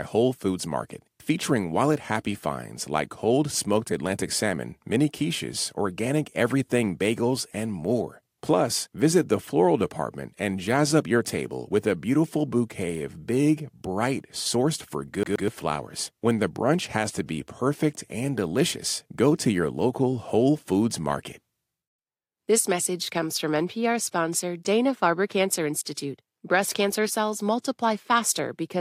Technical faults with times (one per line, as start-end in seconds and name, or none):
15.23-15.48 CD stuck on one turn